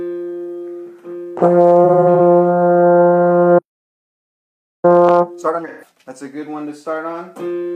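From 1.84 to 2.20 s comes AAC frame loss with concealment. About 171 ms of audio is patched, scattered in short runs of roughly 40 ms at most, which fits about four lost frames. The decoder rebuilt each gap from the last good spectrum, so the sound turns briefly smeared and phasey. A spectrogram shows blurred, noisy columns where fine detail vanishes, while the waveform keeps its level.

At 3.58 s the audio stops mid-flow and stays silent for about 1.25 s, until 4.85 s. The player likely ran out of data or had its output thread blocked. This playback stall appears as a flat line in the waveform and a blank band across every frequency on a spectrogram.

From 4.85 to 6.09 s the player catches up with time-compressed playback at twice normal speed. It drops small pieces and cross-fades the remainder, so the sound rushes at unchanged pitch. On a spectrogram, events are packed closer together but harmonics stay at the same heights.

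Inside that hurried stretch, from 5.68 to 5.89 s, a second AAC frame loss with concealment fills about 128 ms, consistent with three lost frames. It brings another brief smeared, noisy patch, visible as a smudged block on the spectrogram.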